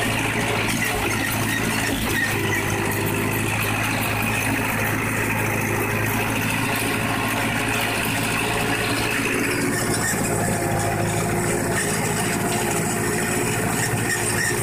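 Nothing in the audio points to a technical problem; it runs its whole course without any glitch, dropout or distortion worth flagging.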